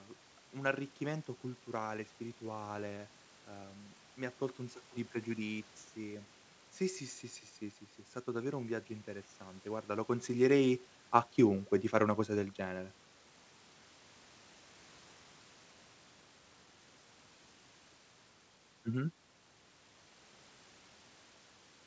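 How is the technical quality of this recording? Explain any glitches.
The technical quality of this recording is good, and there are no glitches to explain.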